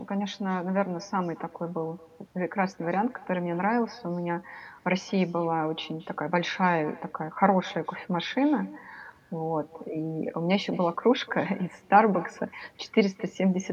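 Speech recording with echo and no canceller throughout: the far end's loudspeaker feeds its microphone, so every phrase returns around 200 ms later, a thin copy about 23 dB down.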